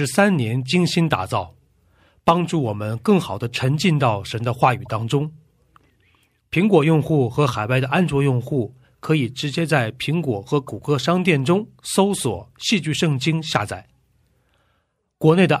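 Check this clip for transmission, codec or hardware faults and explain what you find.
Corrupt frames decoded at two points in the speech. Corrupt frame decoded at 4.78–4.91 s (a few consecutive frames) and 10.67 s (one frame): flipped bits misread gains, causing chirpy bursts of about -25 and -30 dBFS, visible as stray spectrogram blocks.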